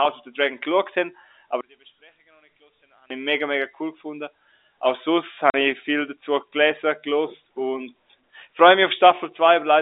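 From 1.61 to 3.10 s, between "geschaut haben" and "ich mega mega cool", the speech sinks about 28 dB to a faint ghost. That's likely one channel inverted, cancelling in the mono sum.

At 5.50 to 5.54 s, just before "ich viel dazu gelesen", there's a 40 ms hole with hard edges. That's packet loss filled with silence, and the gap fits two 20 ms packets.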